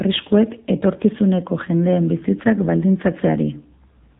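Throughout the recording, the speech sounds thin, boxy and buzzy, with a synthetic edge that is plainly audible. Nothing above about 3.8 kHz survives, so sibilants and breath detail are gone. The cause is the AMR narrowband mobile codec, AMR-NB, which rebuilds each 20 ms frame from a vocal-tract model fed by a handful of pulses. The buzziness fits one of its lower modes, around 7.4 kbps.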